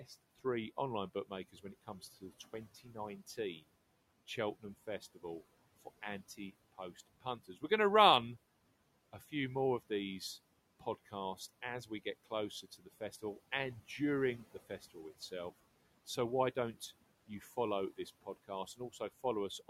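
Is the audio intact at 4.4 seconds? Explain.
Yes, the audio is intact at 4.4 seconds, with only the room's own background noise sitting about 20 dB below the speech as part of the recording.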